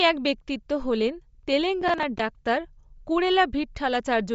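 From the start, the speech has a breathy, grainy edge and nothing above about 7.7 kHz. That's plainly audible codec damage, likely from Bluetooth LC3 compression at a low rate, something like 32 kbps in 10 ms frames, with the upper band thinned and filled in with noise.

Between 1.82 and 2.19 s there's a burst of processor overload crackle. The processor kept missing its deadlines for a run of roughly seven buffers of around 10 ms each. Every miss replayed a scrap of stale audio with hard edges, so you hear a gritty tearing over the speech until the load eases.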